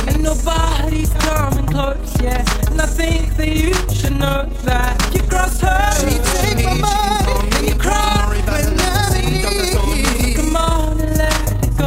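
From start to finish the level pulses at around 30 Hz, a rough flutter typical of overlap-add ripple. Windowed frames were rejoined with an overlap whose gains do not sum flat, so loudness dips by about 6 dB once per frame.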